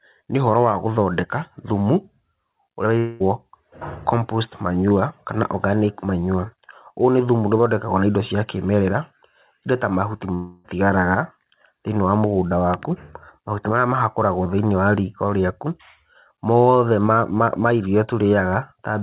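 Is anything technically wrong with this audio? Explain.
Yes. There are two long network dropouts, at 2.98 to 3.22 s and 10.34 to 10.66 s. About 0.22 s and 0.3 s of audio likely never arrived, so the receiver stretched the last sound into a fading buzz that fills each gap without falling silent. The sound then resumes with the lost part missing. The band-limiting to 4 kHz fits a G.711 mu-law call path.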